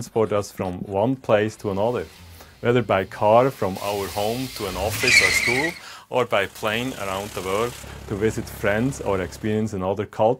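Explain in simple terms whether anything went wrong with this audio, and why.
Pre-emphasis left on, from 3.76 to 7.84 s: the treble was boosted for transmission but never turned back down, so the sound turns thin, bright and hissy.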